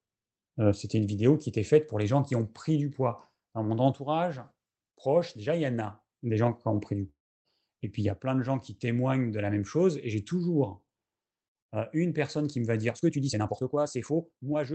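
At 7.09 s the speech breaks off in a long network dropout. The last sound does not stop cleanly. It carries on as a buzzy tail that fades away, and near-silence follows. Speech returns at 7.48 s. About 0.36 s of audio is simply gone. Nothing is replayed. The likely cause is a stretch of packets that never reached the receiver, with the decoder padding the gap until it gave up.

From 12.86 s to the end, the pace jumps suddenly. This is a time-stretched section, sped up by 1.59 times. The pitch stays where it was, so the voice does not turn squeaky. Instead it sounds rushed. That pattern likely comes from software squeezing the audio to fit a shorter length by dropping short slices while keeping the pitch.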